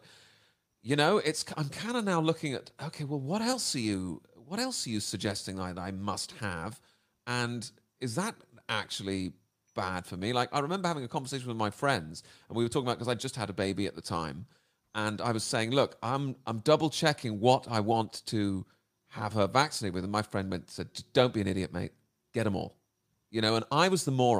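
Nothing in this speech recording stands out as a technical fault; it runs along without any glitch, dropout or other problem catching the ear.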